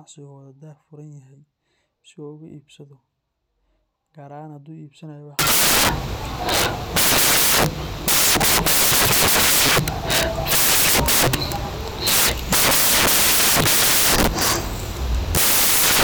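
A speech clip that turns into loud, harsh broadband noise from 5.39 s to the end, caused by samples built from the wrong bytes. The reader misassembles each sample, so the rapidly changing low-order bits become the dominant part of the value.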